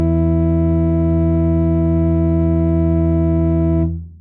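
Nothing goes wrong anywhere in this bit of music, so there's no fault to point to at any moment.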